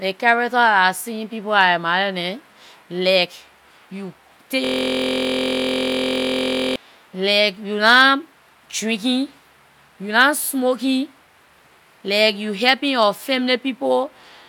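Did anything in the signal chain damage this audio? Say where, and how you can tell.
Yes, a system hang loop: the driver froze from 4.65 to 6.76 s while the hardware replayed one 23.2 ms buffer. It sounds as a 43.1 Hz buzz, with identical repeating waveform cycles and evenly spaced spectrogram comb lines.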